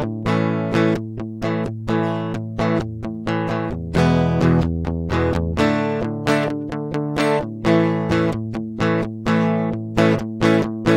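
The music carries no audible technical faults at any point in the recording.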